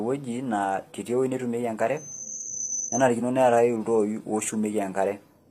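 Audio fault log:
throughout, HE-AAC compression. The damage is plainly audible across the whole clip. Nothing sounds above 15.4 kHz. The speech treble stays bright but sounds synthetic, with gritty, metallic s sounds. The likely cause is HE-AAC, which codes only the lower spectrum. It rebuilds the top by copying lower bands upward under a coarse envelope, so the harmonics there do not match the real ones. The degree of damage fits a low bitrate, around 24 kbps.
1.97 to 3.11 s, loudspeaker feedback squeal. A single tone at 6.2 kHz swells up over roughly 0.4 s. It then holds at about the same level as the speech before stopping at 3.11 s. This is a microphone hearing the loudspeaker it feeds. At 6.2 kHz the loop gain went above one, so that frequency fed on itself and grew. It lasts about 1.1 s.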